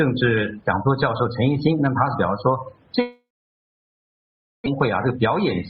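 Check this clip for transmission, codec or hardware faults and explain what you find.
Two transmission faults show up, both in the back half of the clip.

From 3.01 to 4.68 s there's what sounds like a long network dropout, likely the audio simply stopped arriving. The receiver smears the last sound out briefly, then it's about 1.4 s of near silence, and about 900 ms never comes back, shifting the delay by roughly 0.7 s.

Right after, from 4.76 to 5.64 s, you get a jitter buffer speed-up. The buffer held more audio than it aims for, so it trims tiny pitch-period slices, around 40 ms in total. Playback runs about 3% fast at unchanged pitch.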